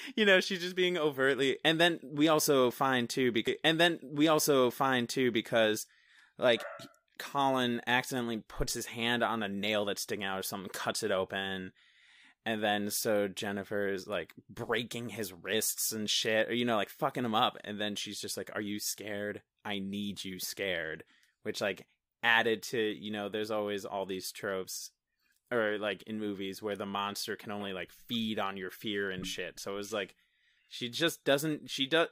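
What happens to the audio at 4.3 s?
A stream segment repeats from 3.46 to 5.46 s, right after "we also find too". The same two seconds of speech replay, with a small blip at the jump.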